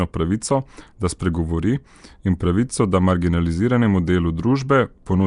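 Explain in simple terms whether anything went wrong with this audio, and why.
The speech was most likely squeezed through Nellymoser compression, the old microphone codec used by Flash. It saves space by cutting the sound into short blocks and giving each one only a tiny, fixed budget of detail. Quiet parts of the sound that get no budget are filled in with noise. Throughout the clip the result is plainly audible: a rough, hissy haze around the voice, a murky, underwater smear, and nothing at all above about 10.6 kHz, so the top sparkle is gone.

At 1.19 s there is a pre-echo. Because the codec works in blocks, a sudden loud sound near the end of a block causes the noise meant to hide inside that loud moment to spill backwards into the silence just before it. Here it spreads about 10 ms ahead of the attack. You hear a brief hiss arriving early, and the sharp start sounds softened and blurred instead of crisp.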